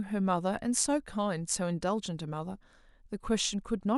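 No technical faults are audible.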